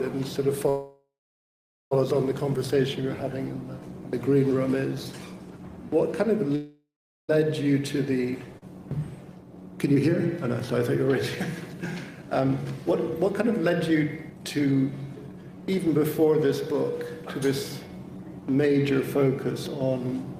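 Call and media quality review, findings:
Call audio freeze, 0.69–1.93 s and 6.55–7.31 s: likely packets delayed and jitter buffer ran dry; last sound continued, fading to silence, inserting 1.2 s and 0.73 s gaps, nothing lost.

Skip ahead, 8.59–8.63 s and 15.16–15.18 s: audio dropped in transit or on buffer overflow; playback jumps forward, roughly 0.7 s and 0.3 s missing, joined almost directly.

Jitter buffer speed-up, 9.35–14.76 s: buffer over target, repeated pitch-period removals (about 0.7 s total); audio runs at 111% speed, same pitch, sounding hurried.

Jitter buffer slow-down, 15.33–20.08 s: buffer low or target raised, pitch periods and pause fragments repeated (256 ms added); audio runs at 95% speed, same pitch, drawn out.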